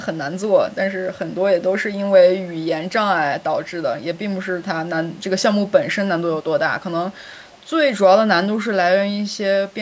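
The far end's echo canceller likely failed to fully remove loudspeaker sound picked up by its microphone, so an echo leak sends a copy of the speech back about 328 ms late. It surfaces four times: a barely audible scrap at 1.31 to 1.35 s, a clearer faint echo from 2.46 to 2.65 s, another very faint scrap at 5.19 to 5.24 s, and a longer, quiet trailing copy from 7.14 to 7.69 s.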